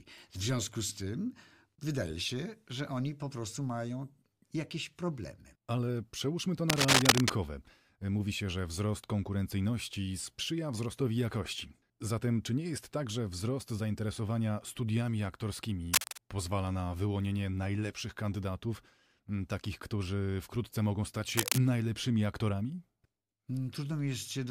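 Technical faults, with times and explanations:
6.70–7.30 s, 15.94–16.18 s and 21.37–21.58 s: cable scratch noise, brief dense bursts of scratchy rustle over the speech, up to about 5 dB above it, likely a worn cable or connector being moved so its contact resistance flickers erratically.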